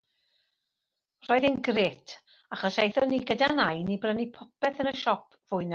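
Packets went missing twice in this speech, and each time the decoder filled in from the low-bitrate copy carried in the next packet, a lost packet rebuilt from error correction. From 1.79 to 1.85 s about 40 ms of sound, roughly two packets, is rebuilt. From 3.43 to 3.85 s about 220 ms, roughly eleven packets, is rebuilt. Neither spot has a gap, but the rebuilt stretches sound rougher and noisier than the 40 kbps Opus audio around them.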